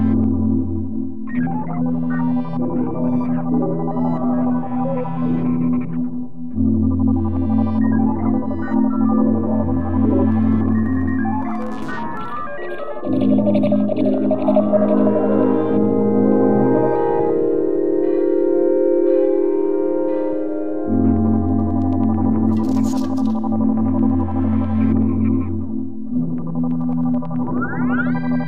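Nothing in the sound itself gives this away, but the DC offset runs through the whole clip: the waveform sits shifted off zero by a constant amount, about -26 dBFS, wasting headroom and showing as a steady line at 0 Hz on a spectrum analyser.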